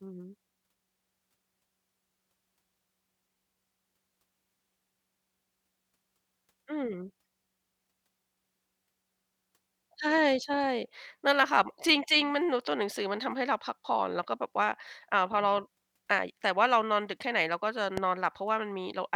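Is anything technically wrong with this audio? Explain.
Yes. A single loud pop lands near the end of the speech, from 17.97 to 18.00 s. It peaks around 10 dB above the surrounding level. It is a short, sharp burst that sits on top of the speech, which carries on underneath without a break. The likely cause is a sudden voltage step or spike, such as a plug, a switch, static or a driver glitch. Later circuitry shaped that pulse into the brief pop heard here.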